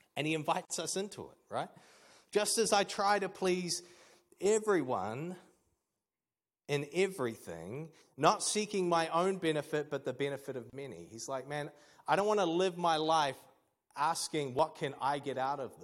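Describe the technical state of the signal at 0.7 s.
Right at 0.7 s there's a gap at a join of encoded pieces: about 46 ms of silence from 0.65 to 0.70 s, where separately encoded chunks were butted together untrimmed, leaving a dropout in the speech.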